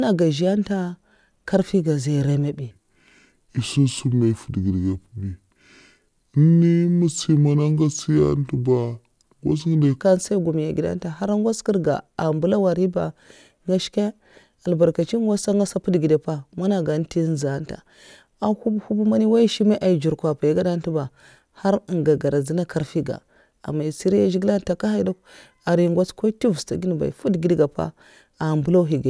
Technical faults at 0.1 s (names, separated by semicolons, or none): none